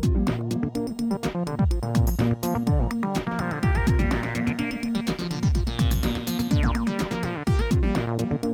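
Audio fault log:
3.31 to 7.31 s, doubled audio track: a second copy of the music is mixed in, likely because a slower capture path or an edit left two copies running out of step. That copy trails the original by roughly a tenth of a second at about 5 dB lower, full-band and with no decay or room colour, so every attack is struck twice as a dry slapback. It cuts in abruptly at 3.31 s and drops out just as sharply at 7.31 s.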